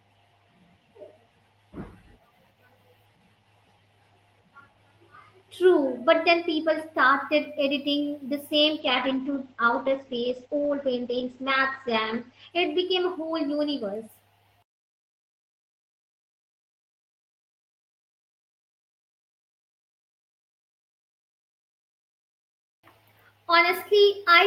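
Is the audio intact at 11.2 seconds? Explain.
No. A call bitrate drop runs from 8.8 to 14.15 s, just after "started editing the same". The Opus encoder fell from 32 to 11 kbps and its bandwidth from 20 to 8 kHz, so at 11.2 s the speech is coarse, watery and muffled.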